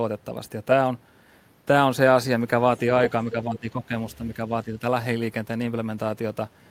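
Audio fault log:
3.32–3.93 s and 4.65–4.83 s, speech suppressed in double talk: the speech dips by around 10 dB, then around 5 dB, likely an echo canceller ducking the near talker while the far side speaks. The waveform envelope visibly shrinks, and spectrogram energy fades across those spans.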